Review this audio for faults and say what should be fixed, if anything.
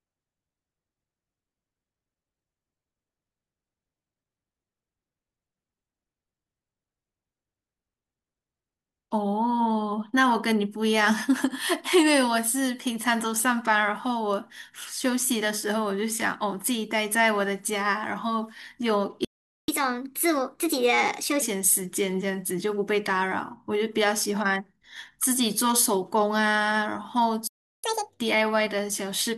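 The speech cuts out twice in a playback stall, from 19.25 to 19.68 s (about 0.43 s) and from 27.47 to 27.84 s (about 0.36 s). Each is likely the player running dry or its thread getting blocked, so output simply goes silent before resuming.

Right after each stall there's a catch-up at higher speed, with the player resampling its backlog to regain lost time. From 19.68 to 21.42 s it runs 1.25 times fast, pitch up about four semitones. From 27.84 to 28.20 s it's doubled, nearly an octave sharp.

Worth fixing: give the player a deeper buffer and keep its audio thread from being starved, and if catch-up is still needed, use time-stretching that doesn't shift pitch, or cap the speed-up gently.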